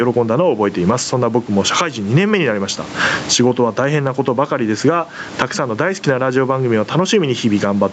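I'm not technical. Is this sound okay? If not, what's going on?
No. The microphone level was likely set far too high, so a fast limiter keeps yanking it down. This gain pumping makes the speech's level swing up and down throughout.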